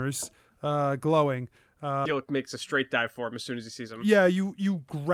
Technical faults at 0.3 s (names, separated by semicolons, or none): none